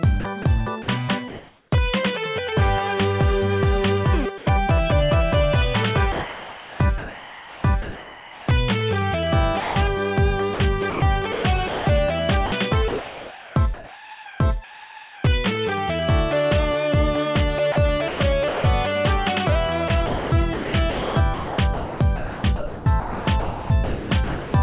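From 0.2 to 1.72 s the sound is chopped by the voice detector. About 560 ms of it is swapped for brief patches of synthetic fill, so quiet edges vanish and the background flickers between real and artificial. The likely cause is a sender detector toggling transmission on and off several times. That repeated switching within one stretch is what separates chopping from a single dropout.

At 4.38 s there is a short instance of sound dropped by the voice detector. About 30 ms of quiet sound was likely judged to be background and not sent. An 80 ms stretch of steady noise stands in for it before the sound resumes. A larger drop begins at 6.12 s and runs to 6.8 s: 380 ms of genuine sound gives way to 680 ms of flat noise. Unlike chopping, each drop is one clean gap with no flicker.

From 6.12 to 8.48 s, comfort noise replaces the background. About 2 s of the real ambience, with its texture, becomes a smooth, featureless hiss, likely generated by the receiver during a transmission pause. 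What distinguishes this from a drop is that it stands in for the background rather than for foreground sound. Only the character of the background changes.

Chopping returns three more times. From 9.6 to 15.24 s about 2.64 s is filled. From 17.72 to 18.64 s about 320 ms is filled. From 19.88 to 24.54 s about 2.94 s is filled. Throughout the clip nothing reaches above 4 kHz, which fits a narrowband G.711 call path.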